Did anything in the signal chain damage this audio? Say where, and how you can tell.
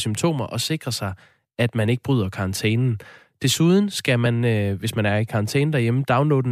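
Yes, at the codec stage: compressed frames were skipped at 4.25 s, just before "øh hvis man er". About one 26.1 ms frame is lost, so the audio jumps ahead by roughly 30 ms.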